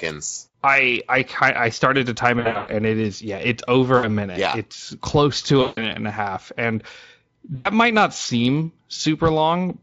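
VoIP packet loss concealed by the speech codec occurs at 2.39–2.72 s (after "I started to time"), 3.97–4.09 s (after "it is yeah it's"), 5.61–5.88 s and 7.55–7.69 s (before "might not seem"). The decoder extrapolates the last pitch and filter with falling gain, stretching the sound into a fading buzz or tinted noise that stays weak briefly after recovery. All of this comes through a Speex speech codec, lightly marked at about 28 kbps.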